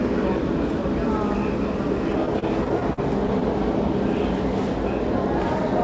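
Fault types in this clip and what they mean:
Repeated stalls (stutter): between about 2.26 and 3.43 s the sound freezes eight times as late-arriving data leaves the playback buffer empty, and each hole is bridged by stretching what came just before. The holds total about 132 ms, the longest 44 ms, roughly 11% of that stretch, with nothing lost. On a spectrogram, already empty above 8 kHz from the call codec, brief horizontally smeared blocks interrupt the texture; the waveform shows repeated, looped-looking segments.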